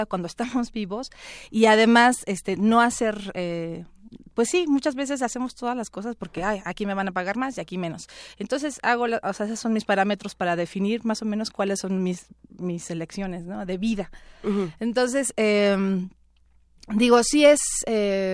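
No audible technical faults.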